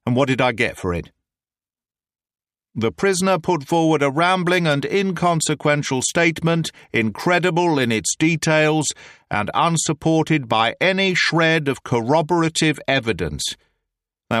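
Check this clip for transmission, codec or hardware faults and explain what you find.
No transmission, codec or hardware faults can be heard anywhere in the clip.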